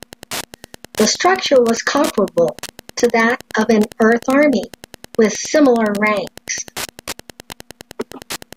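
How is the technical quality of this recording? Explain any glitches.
The technical quality is poor: two faults run through the whole speech clip, a steady radio-frequency tick and a grainy distortion that follows the speech.

Wi-Fi interference, present throughout: a nearby Wi-Fi radio's signal is being picked up and rectified by the audio circuit. Its beacon repeats every 102.4 ms, so you hear a regular ticking about ten times a second. It sits roughly 20 dB below the speech.

Low bit depth without dither, present throughout: the speech carries a gritty, sandpapery edge that rises and falls with the voice. This is most likely caused by the signal being cut to a small number of bits, consistent with roughly 10-bit resolution, by truncation rather than dithered rounding. Because the error tracks the signal instead of forming a smooth hiss, quiet syllables and decaying word endings sound rough. 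The error sits around 50 dB below the speech.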